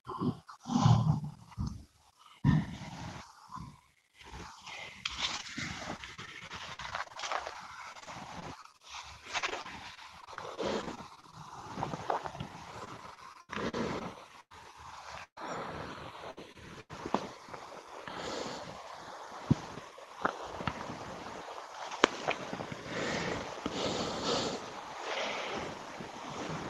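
From 5.37 to 11.35 s the audio turns choppy and robotic. This is repeated packet loss: dozens of short holes, none longer than 46 ms, each patched by extending the preceding sound, so about 13% of the stretch is synthetic fill with the real audio missing underneath.

A second stretch of repeated packet loss runs from 12.85 to 14.55 s, with fewer but longer holes of up to 99 ms. Concealment covers about 18% of the span, giving a choppy, stuttering texture.

A burst of packet loss at 15.23 to 15.38 s removes about 140 ms. The receiver stretches the last sound and fades it, and the final 80 ms drops to near silence before the audio resumes further on. Shorter bursts at 16.31 to 16.39 s and 16.81 to 16.91 s lose about 60 ms and 80 ms, each heard as a brief held buzz or fading hiss followed by a jump.

Between those two bursts, at 16.53 to 16.57 s, a short concealed packet loss of about 20 ms is filled by continuing the preceding sound and blended back, leaving a brief smear or wobble. 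Throughout, the Opus call path limits the audio bandwidth to 12 kHz.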